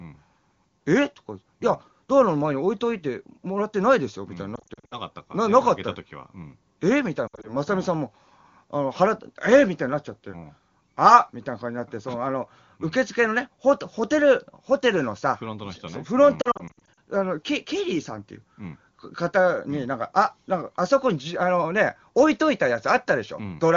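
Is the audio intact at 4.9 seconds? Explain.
No. At 4.9 seconds the audio falls inside a burst of lost AMR speech frames running from about 4.55 to 4.96 s. Roughly 220 ms of frames fail their checksum, scattered across about 360 ms, with the longest unbroken run lasting 60 ms. For each missing frame the AMR-WB decoder repeats the last good pitch and vocal tract settings at falling gain. Within a run this fades fast, so the sound warbles, smears and dips, then returns weak or rough. On a spectrogram, frozen, blurred harmonic bands alternate with brief energy holes. The waveform shows an uneven, pitted envelope with short sags instead of a steady contour.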